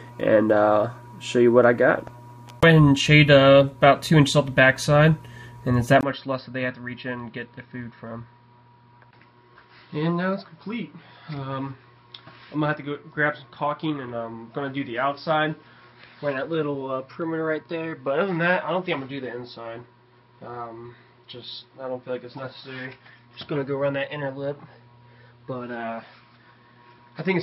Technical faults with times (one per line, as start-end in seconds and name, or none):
6.01-27.43 input switched to a poorer device